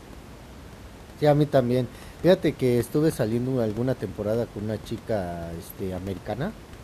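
A short bit of speech with nothing technically wrong to point at, just some room noise sitting about 19 dB below the talking, which belongs to the recording space rather than the system.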